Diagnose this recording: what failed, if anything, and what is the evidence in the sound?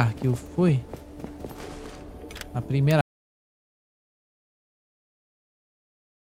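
An audio dropout to silence begins at 3.01 s and runs to the end. The sound stops and never returns. The gap is silent, with no room tone. The input was likely lost at the wiring or device, while the recorder kept writing silence.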